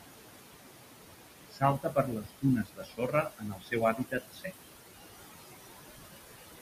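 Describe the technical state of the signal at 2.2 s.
At 2.2 s the speech is being cut by the noise suppressor. This runs from 1.5 to 2.45 s, and most of that span is affected. The suppressor mistakes parts of the speech for steady noise. It turns those bands down along with the background, by about 21 dB at the deepest point. Soft consonants and word endings sound swallowed or faint. The speech seems to drop away in places.

The same moment also carries noise suppressor artifacts, which run through the whole clip. The suppressor pulls down what it judges to be noise by about 19 dB, frame by frame. The room noise, sitting about 10 dB below the speech, sinks in the gaps and rises again under the speech.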